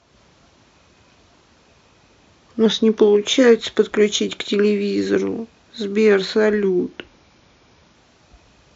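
At 2.66 to 3.25 s and again at 6.64 to 7.95 s, the speech slows by 6.25% and drops about a semitone before snapping back, likely a drift correction step from clock-matching software.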